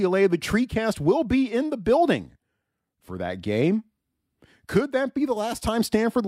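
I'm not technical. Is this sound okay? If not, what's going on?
Yes, nothing in this speech stood out as a problem when I listened to it.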